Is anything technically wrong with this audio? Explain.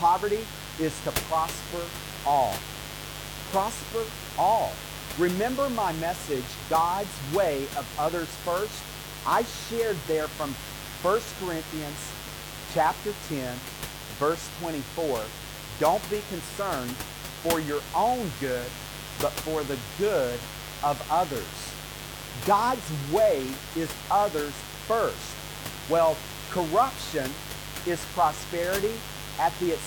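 Yes. A mains buzz runs through the entire speech clip, roughly 15 dB below the voice. Sharp switching spikes from a dimmer, rectifier or poor shielding enter twice per 50 Hz cycle, stacking harmonics into the kilohertz range and producing a steady, raspy buzz a little below the room noise.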